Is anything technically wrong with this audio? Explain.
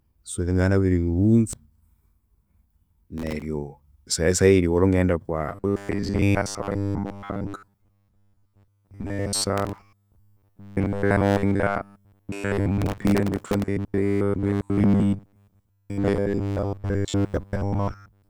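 Yes. Processor overload crackle occurs at 3.18–3.44 s, 9.58–9.81 s and 12.82–13.63 s. Very short buffers, around 1.5 ms, miss their deadlines repeatedly and hold stale audio, producing gritty tearing. This shows as dense vertical clicks on a spectrogram.

From 5.49 s to the end, robotic sound from repeated short buffers, likely from roughly 10 ms chunks being replayed, imposes a rigid 100 Hz metallic buzz. This appears as evenly spaced harmonic lines.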